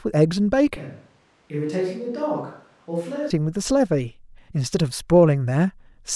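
At 0.77 s the speech abruptly turns roomy and hollow, dropping roughly 10 dB with thinner bass and audible background noise well below it, until it snaps back at 3.30 s. This is likely a switch to a distant microphone after the close one's feed dropped out.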